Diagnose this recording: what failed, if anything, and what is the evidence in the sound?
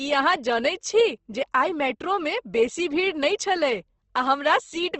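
Opus compression, throughout the clip, at the codec stage. The speech sounds grainy and rough instead of swirly, with plainly audible damage, and nothing reaches above 8.2 kHz, a wideband ceiling. The likely cause is the encoder's music (CELT) mode at a rate that fits around 16 kbps. Too few bits for every band, so the codec keeps each band's energy but fills the detail with folded or noise-like content, turning clean tones gritty.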